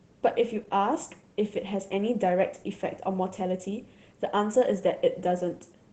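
Opus voice compression runs through the entire speech clip, and the damage is plainly audible. The sound points to Opus's hybrid mode at a low rate of around 16 kbps, with 20 ms frames: the linear-prediction layer carries the lower band while a transform layer adds content above 8 kHz. Because so few bits are spread across the full band, the excitation is coded coarsely, leaving the speech hoarse and faintly robotic.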